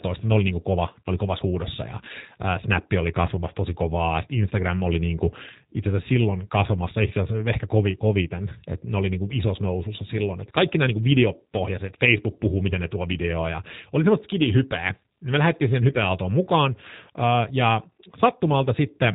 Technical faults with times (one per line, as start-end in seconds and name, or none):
0.00-19.14 G.729 codec